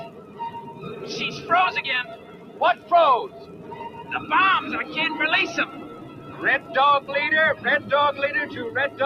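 From the start, a noise suppressor applied to music or sounds treats steady material and tails as noise, swinging the gain by about 15 dB. The waveform envelope rises and falls unevenly, and on a spectrogram sustained bands and decays fade while onsets stay bright.

The sound is cut by the noise suppressor at 0.07–0.4 s (down about 8 dB), 0.66–0.83 s (about 6 dB), 2.16–2.91 s (about 8 dB), 3.28–4.1 s (about 8 dB) and 5.83–6.4 s (about 6 dB). Each shows as a dip in the waveform and a darker stretch on the spectrogram.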